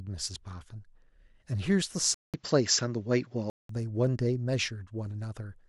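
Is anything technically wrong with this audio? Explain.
Yes. From 2.14 s to 3.69 s the speech drops in quality, consistent with the input switched to a poorer device, likely the recording moving to a different microphone or a headset call profile. A silence of about 0.19 s marks the switch. That device passes nothing above 7.6 kHz, so the speech turns dull and boxy. The level shifts by a few dB, and a faint new noise floor, roughly 50 dB below the speech, appears before the original input returns.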